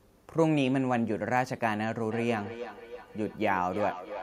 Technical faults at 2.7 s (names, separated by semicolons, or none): feedback echo between two devices